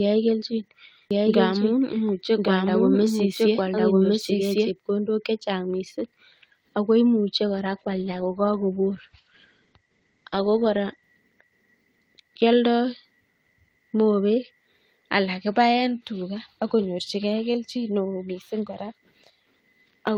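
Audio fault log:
1.11–4.71 s, doubled audio track: The speech is layered over itself, with a second copy trailing about a second behind at much the same loudness. The likely cause is the signal being picked up again through a slower route, or an edit leaving two copies out of step. The trailing copy is full-band and dry, with no decay or room colour, and it starts and stops abruptly, so the overlap sounds like a hard, unnatural echo.
7.49–11.11 s, call bitrate drop: The call's bandwidth estimate fell, and the encoder was told to go from 32 kbps down to 12 kbps, holding that floor for about 3.55 s. With so few bits the coder quantises the speech coarsely and narrows the audio band from 20 kHz to 8 kHz. The top end disappears and the sound turns muffled, rough and watery until the bitrate recovers.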